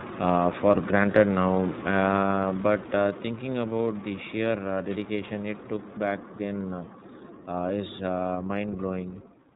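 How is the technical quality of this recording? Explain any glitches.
The recording is limited by plainly audible iLBC codec damage across the whole speech clip. This narrowband VoIP codec codes each frame's excitation independently, and the roughness fits 30 ms frames at around 13 kbps. Nothing above 4 kHz survives, so the speech sounds clear but boxy, slightly gritty and synthetic. A spectrogram shows a hard ceiling at 4 kHz with empty space above it.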